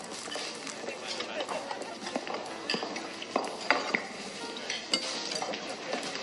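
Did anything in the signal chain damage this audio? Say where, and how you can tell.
Yes, at the codec stage. Throughout, the treble stops abruptly at 11.3 kHz and the sound turns watery and swirly, with smeared attacks. That points to likely MP3 compression at about 48 kbps: the starved encoder drops the top band and toggles weak frequency lines between frames.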